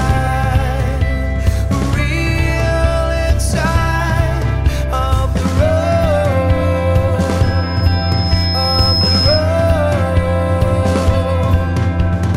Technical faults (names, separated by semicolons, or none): loudspeaker feedback squeal